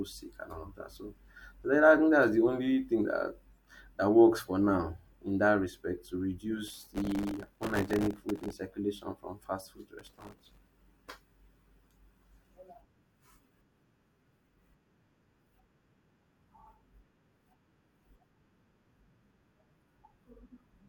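The processor repeatedly misses its deadlines on very short buffers, which fits buffers of around 1.5 ms, and replays stale audio each time. The result is processor overload crackle, a gritty tearing from 6.68 to 8.53 s after "in that respect to", and again from 9.99 to 10.71 s after "circulation from fast food".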